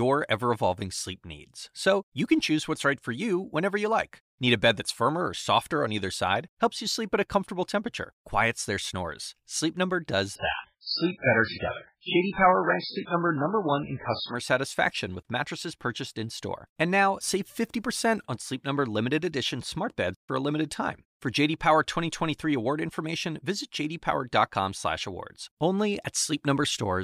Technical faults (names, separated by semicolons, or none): adaptive stream at a lower bitrate